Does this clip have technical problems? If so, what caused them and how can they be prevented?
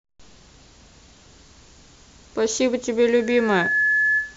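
Yes, there's a loudspeaker feedback squeal starting at about 3.20 s and running right to the end of the clip. A single tone near 1.7 kHz swells up over roughly half a second until it's about as loud as the speech itself. That's the mic picking up the speaker it feeds, with the loop gain topping one at that frequency so the tone keeps reinforcing itself. To prevent it, keep mics out of the speakers' coverage, lower the monitor gain, or notch out 1.7 kHz.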